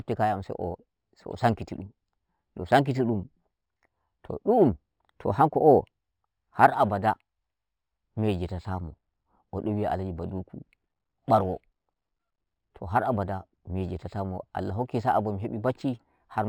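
Throughout the speech, imaging from linear upsampling is present. The rate conversion drew straight lines between samples, which points to a 12 kHz original raised to 48 kHz. That crude interpolation filters poorly, so the top of the original band is dulled while a faint mirror copy of the spectrum survives between 6 kHz and 12 kHz, roughly 40 dB below the signal. It adds a light metallic shimmer to sibilants.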